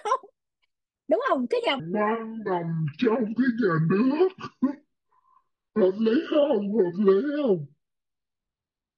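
At 1.8 s the speech suddenly drops into a section at the wrong speed, and it stays that way to the end. From there it runs at about 0.55 times its proper rate, so it drags, and the pitch sinks along with it, roughly ten semitones, giving a deep, slow-motion quality. Speed and pitch shifting together like that most likely means the rest of the clip was played back against the wrong clock.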